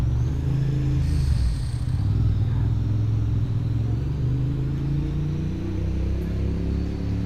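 No technical faults can be heard in this recording of sounds. Nothing in the audio points to a dropout, glitch or other processing problem at any point.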